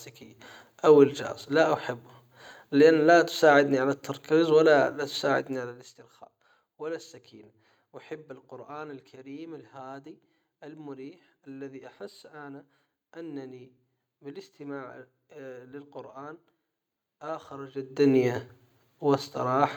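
From 17.73 to 18.14 s the speech carries zipper noise: a level change of about 20 dB is applied in 1 dB steps, around a hundred per second, without smoothing. Each step clicks, producing a rapid ticking buzz.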